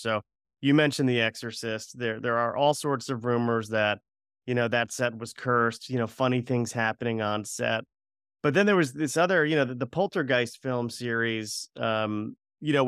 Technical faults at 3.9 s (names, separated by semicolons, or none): none